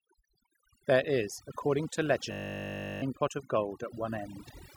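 Overdone noise removal runs through the whole speech clip. The noise reducer is set far too hard. It pulls single frequency bands down whenever they sit near its noise estimate. Quiet parts of the voice vanish with them. The background becomes near silence with twinkling specks.

At 2.32 s, right after "is according to", a system hang loop begins. The machine froze while the sound hardware kept replaying one 20 ms stretch of its buffer. That loop repeats dozens of times at 50 Hz. It sounds like a steady buzz. It ends at 3.02 s, before "pot of". About 0.7 s of real audio is lost.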